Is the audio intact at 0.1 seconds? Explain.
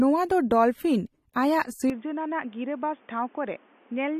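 No. At 0.1 seconds the speech already sounds dull and smeared, with a fizzy, warbling texture on sibilants and sustained sounds, and nothing is present above 16.4 kHz. This is AAC compression damage, and it runs throughout the clip. The cause is likely AAC-LC encoding at a low bitrate, around 32 kbps, where the encoder lowers its cut-off and coarsely quantises each frame's spectrum, leaving holes and substitute noise in place of detail.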